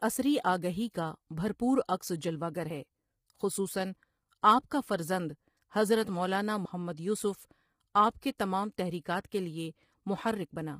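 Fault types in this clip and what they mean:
Low-delay AAC compression: throughout, the speech sounds heavily rough and grainy, with noise between harmonics and a thin top band, likely AAC-ELD at around 24 kbps.
Audio missing between chunks: at 2.70 and 6.65 s, roughly 50 ms vanishes and the sides join abruptly, likely lost while processing switched between 4-second chunks.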